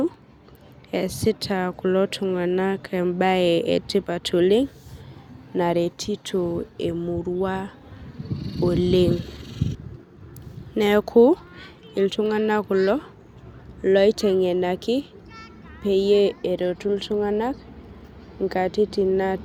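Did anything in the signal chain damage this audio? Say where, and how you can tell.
No, nothing along the chain has left a mark on this speech recording, so there's no stage to point to and nothing to chase down.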